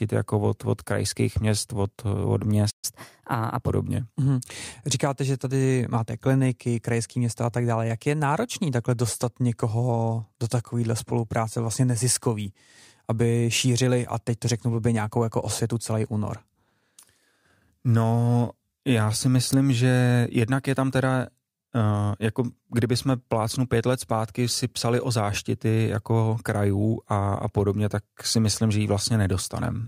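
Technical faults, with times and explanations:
2.70–2.85 s, playback stall: the speech cuts out mid-flow into about 126 ms of silence, then resumes where it broke off. The likely cause is the player running dry of buffered data, or its output thread being blocked, until it recovered.
2.85–3.69 s, catch-up at higher speed: straight after the gap the speech runs quicker and higher, at 1.15 times normal speed and roughly two semitones up, then settles back. The player is resampling its backlog to recover the lost time.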